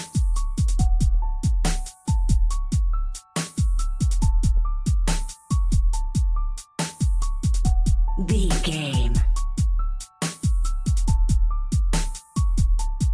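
No faults turn up anywhere in the recording on listening through.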